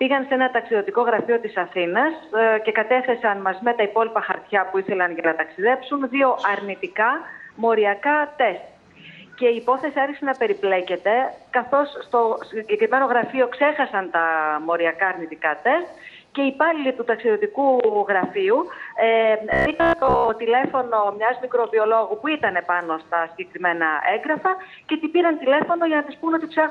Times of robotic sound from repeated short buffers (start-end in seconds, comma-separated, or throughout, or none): 19.53-20.31